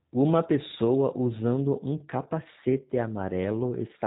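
Throughout, the speech shows G.729 codec damage. Nothing above 3.8 kHz passes, and each 10 ms frame is rebuilt from a filter, a pitch predictor and sparse pulses. That gives a rough, synthetic edge, which fits 8 kbit/s G.729A. A plain low-pass would dull without roughening.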